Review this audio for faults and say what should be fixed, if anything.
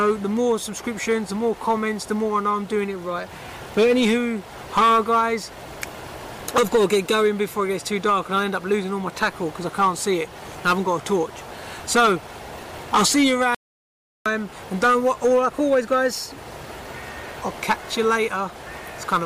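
An audio dropout to silence runs from 13.55 s to 14.26 s. For about 0.71 s the sound stops abruptly mid-flow and the gap is silent, with no room tone at all, before the audio resumes just as abruptly. That points to the input signal being lost, likely through a momentary disconnect, link failure or accidental mute, while recording carried on writing silence. A noise gate would close with a short release fade. Its gap would typically keep some residual noise, and it would not cut through ongoing sound. Secure cables and links, and monitor input levels during recording so a loss of signal is caught at once.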